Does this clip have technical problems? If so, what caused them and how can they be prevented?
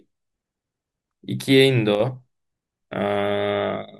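Yes. From 1.95 to 2.00 s the speech dips abruptly by about 6 dB, likely one channel dropping out before the mono sum. The waveform shows a brief, sharp-edged step down; the spectrogram a thin, uniformly fainter vertical band. Monitoring both channels and securing connections prevents it.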